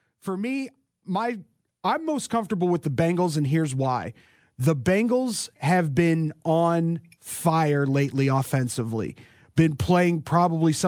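From 0.25 to 2.79 s there's automatic gain rising: the AGC judged the speech too quiet and eased its gain up about 8 dB, so voice and background swell together.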